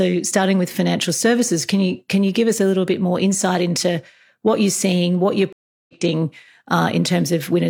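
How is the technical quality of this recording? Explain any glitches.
One glitch: a stream reconnect from 5.53 to 5.94 s, just after "you're seeing what you're". The connection dropped, leaving about 0.36 s of silence, then a fresh decoder restarted. Audio resumes roughly 0.2 s later in the stream, skipping material rather than picking up where it stopped as a plain dropout would.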